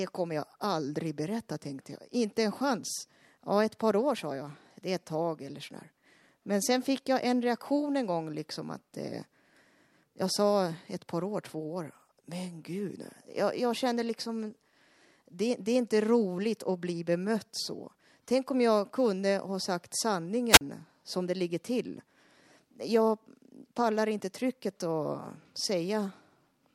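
At 20.51 s, right after "jag kunde ha sagt", the speech suffers a wireless microphone squelch dropout lasting until 20.61 s. The analogue FM link weakens, so hiss swells briefly before the receiver's squelch cuts the output to near silence for about 40 ms; the speech resumes at "som det ligger till". That rising static before the gap sets it apart from a digital packet dropout or an edit cut, both of which fall silent abruptly with no noise beforehand.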